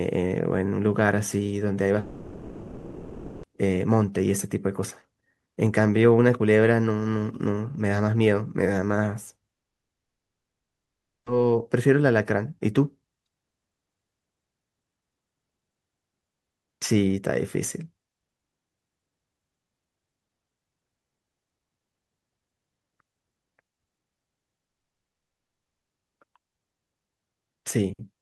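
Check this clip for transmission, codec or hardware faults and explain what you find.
Three long network dropouts break the speech, each likely caused by a stretch of packets that never arrived, so the missing speech is lost rather than delayed.

From 1.99 to 3.45 s (1.44 s), the receiver extends the last sound as a fading buzz or hiss that never settles into silence.

From 9.54 to 11.28 s (1.72 s), the whole gap is silence.

From 24.66 to 25.92 s (1.24 s), the whole gap is silence.

Unlike a brief packet-loss glitch, each gap lasts over a second. Unlike a hardware mute, the first gap's sound trails off rather than stopping, and the speech resumes later, not where it was cut.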